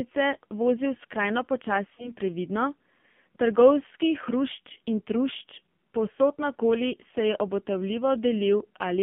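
The whole speech clip carries the sound of the AMR narrowband mobile codec. The band is held to roughly 150 Hz to 3.4 kHz, so there is no air or sparkle above that. The codec damage is heavy. Each 20 ms frame rebuilds the voice from a vocal tract model fed by a few pulses. Here that leaves a buzzy, synthetic edge. The thinness fits a low AMR-NB mode near 5.9 kbps.

From about 1.96 to 2.12 s there is a lost AMR speech frame. The damage points to a single missing 20 ms frame that failed its check. The decoder filled the gap by repeating its last pitch and vocal tract settings at lower gain. The result is a short dip or warble. The voice then takes a moment to come back to full strength and clarity.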